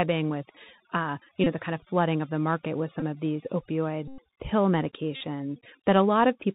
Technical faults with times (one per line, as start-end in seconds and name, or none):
0.00-6.54 overdone noise removal
0.00-6.54 Bluetooth CVSD headset codec
1.44-1.46 Bluetooth headset packet repeated
3.00-3.03 Bluetooth headset packet repeated
4.08-4.20 Bluetooth headset packet repeated
5.16-5.21 Bluetooth headset packet repeated